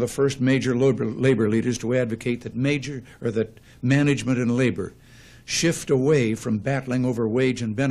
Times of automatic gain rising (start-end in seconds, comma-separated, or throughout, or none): none